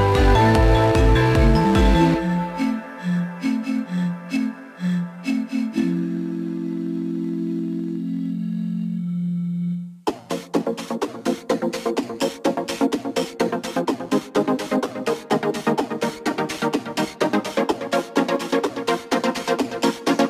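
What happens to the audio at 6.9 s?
At 6.9 s, crude rate conversion is present, as it is across the whole clip. Samples are dropped or repeated, which fits a 48 kHz to 44.1 kHz conversion, adding inharmonic fizz roughly 30 dB down.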